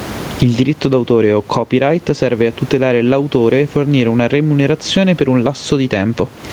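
Speech with gain pumping running through the whole recording: the gain keeps swinging up and down by something on the order of 20 dB. The room noise itself sits about 30 dB under the speech. Loud and quiet passages come out squeezed toward one level. The likely cause is input gain set far too high for the microphone, with a fast limiter or compressor clamping down on each peak and releasing between them.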